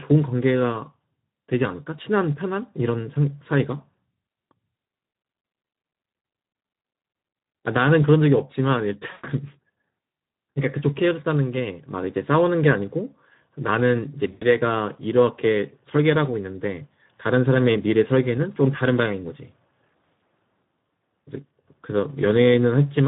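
Across the whole clip the speech sounds hoarse, grainy and plainly coded, with a noisy buzz riding on the voice. That is Speex codec damage: this CELP coder has few bits for the excitation signal, and the roughness points to a rate near 11 kbps.

At 9.11 to 9.27 s the voice smears into a fading buzzy tone or coloured noise for about 120 ms, and again at 14.31 to 14.46 s for about 100 ms. This is VoIP packet loss concealed by the speech codec. The decoder repeated its last pitch and filter with falling gain, which points to five or six lost frames each time. The speech stays weak briefly after each gap.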